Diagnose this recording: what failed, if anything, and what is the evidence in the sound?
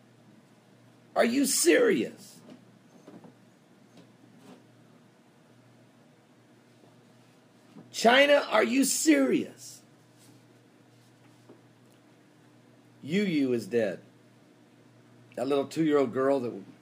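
The failure is in sample-rate conversion: audio at 24 kHz was raised to 48 kHz by straight-line interpolation between samples, and the result is imaging from linear upsampling throughout the clip. That crude filter dulls the top of the original band and leaves a mirrored copy of the spectrum from 12 kHz to 24 kHz, roughly 25 dB below the signal, heard as a metallic shimmer on high content. On a spectrogram, the region above 12 kHz shows a reflected image of the content beneath it.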